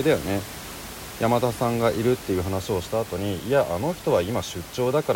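Nothing in this speech recording stood out as a technical fault on listening, and the room noise that sits about 15 dB below the speech is simply part of the recorded space.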